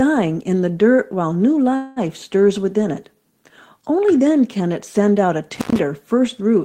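A speech recording with two separate faults. From 1.75 to 1.99 s there is a call audio freeze. The last sound is stretched into a fading buzz or hiss for about 210 ms. Nothing appears to be lost. The speech then resumes where it stopped. This points to packets held up in transit, which likely emptied the jitter buffer. At 5.54 to 5.79 s an intermittent contact fault occurs. The audio drops out for about 112 ms. Crackle marks both edges of the gap. Faint hiss fills the break. This fits a loose cable or plug briefly opening the line.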